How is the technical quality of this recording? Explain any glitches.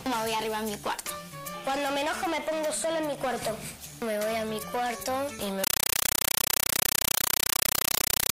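The technical quality breaks down badly near the end. From 5.64 s to the end of the clip, a compressed stream is played as audio. A bitstream meant for a decoder was passed through as if it were ordinary samples, so each data frame comes out as an 8 ms burst of noise followed by silent padding, repeating 31.25 times a second. That frame rate points to a Dolby Digital (AC-3) stream, likely at 384 kbps. The result is very loud, rapid chattering static that replaces the sound entirely.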